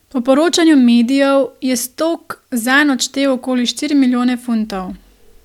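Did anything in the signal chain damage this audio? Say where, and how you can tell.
No, nothing in the signal chain stood out as damaging this speech on listening.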